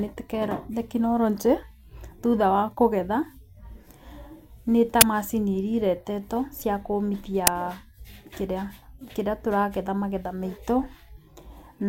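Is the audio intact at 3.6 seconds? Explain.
Yes, the audio at 3.6 seconds is intact, with no dropout, click, distortion or other fault to be heard at that moment.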